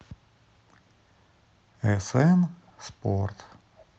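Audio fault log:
3.77–3.85 s echo leak: a very faint copy of the speech, roughly 30 dB below it, returns 444 ms late. A loudspeaker echo canceller likely missed some residue. On a spectrogram it appears as a weak repeat of earlier harmonic bands.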